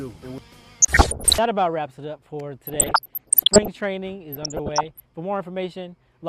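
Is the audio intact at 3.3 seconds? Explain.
No. At 3.3 seconds the audio sits inside a stretch of DAB burbling that runs from about 2.67 to 3.68 s. Weak reception lets bit errors slip past the error correction, at a rate near one percent. Corrupted samples then put short blips of noise into individual sub-bands, and corrupted scale factors make sub-bands leap in level for up to a frame. The result is a burbling, bubbly disturbance over the sound.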